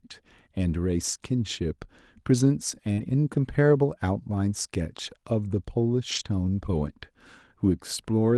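At 2.93 to 2.99 s there is short concealed packet loss: about 40 ms never arrived, and the decoder extended the preceding sound to cover it, giving a brief smear. From 2.97 to 2.99 s, and again from 6.11 to 6.21 s, a lost packet was rebuilt from error correction. Low-bitrate backup copies replaced 20 ms and then 60 ms, which fits one and then three packets. Those stretches sound rougher and hissier, appearing as grainier, noisier bands within the Opus path's 12 kHz ceiling.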